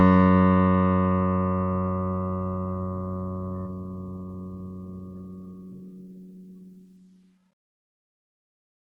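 At 3.65 to 3.67 s the music lurches forward with no gap or fill, the passage before the cut butting straight against later material so the phrase loses its continuity. This is a skip ahead: about a second of audio never reached playback, dropped in transit or discarded when the jitter buffer overflowed, and the receiver resumed from audio already queued, shortening the delay by roughly a second.

From 3.75 to 6.05 s the music hurries, running about 16% fast (116% speed) with its pitch unchanged, so the tempo pulls ahead instead of holding steady. This is a jitter buffer speed-up: the buffer held more audio than its target, and to trim that excess the receiver repeatedly cut out tiny pieces, each one or a few pitch periods long, removing somewhere around 400 ms in total over this stretch.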